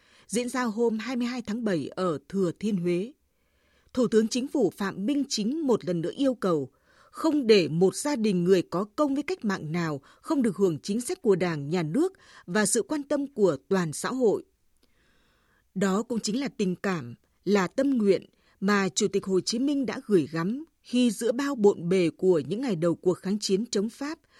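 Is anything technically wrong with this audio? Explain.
No, there is nothing technically wrong with this recording.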